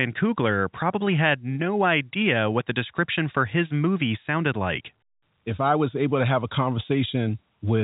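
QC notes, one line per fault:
Nothing stood out on listening to the speech, which carries the band limit of G.711 telephone coding with no content above about 3.8 kHz.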